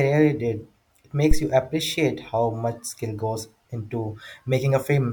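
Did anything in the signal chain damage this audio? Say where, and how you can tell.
Yes. At 1.31 s a phantom power thump hits the analogue input stage, lasting until about 1.43 s. Supply voltage switching on a live input forces a DC step through the coupling capacitors, producing a deep low-frequency thud that peaks at about -4 dBFS and dies away with a decay of roughly 27 ms. Unlike a digital click, which is a sharp broadband tick, this has a rounded, bass-heavy body with a smooth exponential tail.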